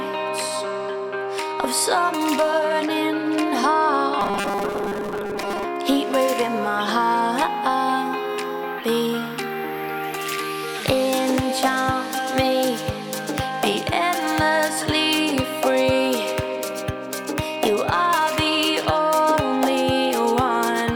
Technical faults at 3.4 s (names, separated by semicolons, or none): none